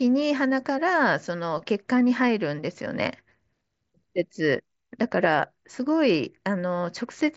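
The speech shows no technical faults, arriving through a Bluetooth mSBC headset link that carries it as wideband audio up to about 8 kHz, as that codec is designed to do.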